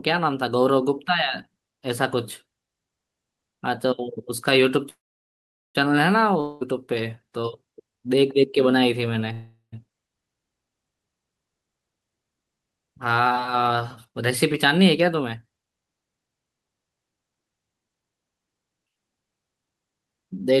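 At 4.89 s the speech stops and a short buzz carries the last sound before fading. Silence follows for about 0.79 s. At 5.77 s the speech resumes exactly where it stopped. This is a call audio freeze, likely from delayed packets draining the jitter buffer. Nothing is lost, but 0.85 s of gap is inserted, so everything after runs later.

From 6.41 s to 6.63 s the sound becomes a fading buzz for 0.2 s, with no silence. When speech returns, that 0.2 s is missing. This is a long network dropout, likely packets that never arrived. It is short for the type, so the concealment never decays fully to silence.

At 9.33 s a second call audio freeze begins, likely from the same buffer running dry. The buzz fades into about 0.12 s of silence. Speech picks up again unbroken at 9.74 s, adding another 0.4 s of delay.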